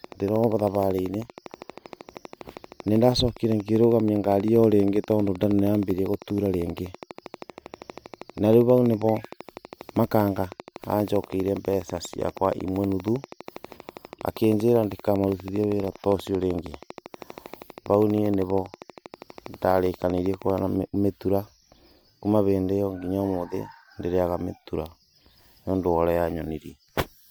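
From about 0.04 s to 20.59 s, a train of clicks runs under the speech. The clicks come at a steady pace, about 12.6 per second, some three hundred in all. Each has much the same sharp shape. They peak roughly 5 dB above the speech, so they stand out clearly. The result is a fast, even ticking that carries on through the pauses. The likely cause is electrical interference or a faulty connection or power supply injecting a repeated pulse.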